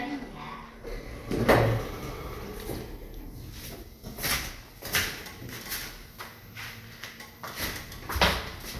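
Sounds, with no audible technical faults anywhere.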